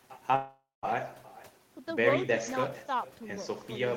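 Speech runs through the whole clip with echo with no canceller: every phrase returns as a thinner copy about 20 dB down, arriving roughly four tenths of a second later. Unlike room reverberation, which smears directly into the sound, this is a distinct delayed repeat, the far end's loudspeaker feeding its microphone. From 0.35 to 0.86 s there is a long network dropout, likely from audio failing to arrive. The last sound stretches into a fading buzz or hiss, leaves about 190 ms of silence, and then the speech resumes with a stretch missing. That decaying fill and the lost material set it apart from a simple mute.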